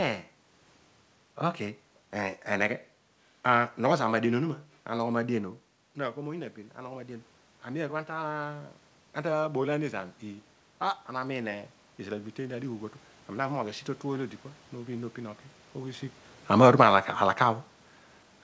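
Speech heard through a call path whose bandwidth stops at about 8 kHz, consistent with a G.722 codec. The fault is automatic gain rising. Around 5.5 s the talker moves back and the level at the microphone drops by about 13 dB. From 5.33 s to 8.79 s the gain control responds slowly, lifting the level by about 5 dB. Voice and room noise swell together across those three and a half seconds.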